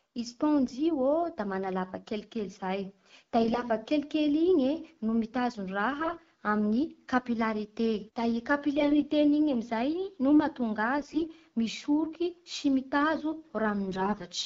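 Short bursts of AMR bit errors at 0.64–0.73, 3.42–3.64, 5.98–6.20, 8.76–9.03, 10.98–11.26 (after "no mahatonga") and 13.88–14.27 s, the first noticeably heaviest. Flipped bits in the less protected parts of each frame misplace the excitation pulses and skew pitch, gain and spectral detail, so the sound turns hoarse and gargly. Unlike a dropout, level and pitch largely continue. Between bursts, the wideband coding sounds clean, which fits a rate around 12.65 kbit/s.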